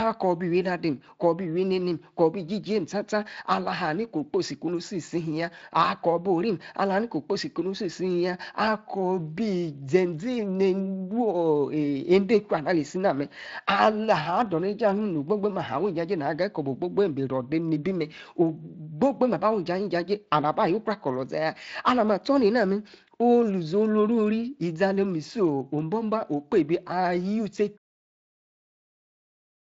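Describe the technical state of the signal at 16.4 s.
At 16.4 s the audio is intact, with no fault present at that moment.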